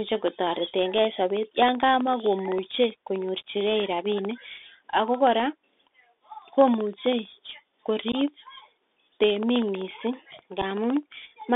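From start to finish the speech has been through a Bluetooth CVSD headset codec, and the damage is easy to hear. The band runs only from about 250 Hz to 3.6 kHz, which gives that boxy phone-call sound and fits a 64 kbps one-bit link. Each sample just nudges the level up or down by an adaptive step, so loud bright moments outrun the step and distort, s sounds come out scratchy, and a grainy hiss sits under everything.

Then there's unconcealed Bluetooth headset packet loss, twice. At 8.12 to 8.15 s about 15 ms of audio, a couple of packets' worth, simply drops out and nothing fills the gap, so you get a hard-edged hole that can tick at its edges, with the sound coming back briefly quieter as the CVSD step recovers. A shorter single-packet loss of 7.5 ms hits at 10.62 s and leaves another short, abrupt hole.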